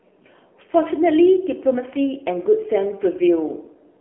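Speech, carried through the AMR narrowband mobile codec for its whole length. Nothing reaches above 3.6 kHz, and the band sits roughly between 300 Hz and 3.4 kHz. Coding damage is plainly audible. The thin, buzzy texture fits a low AMR-NB mode around 7.4 kbps.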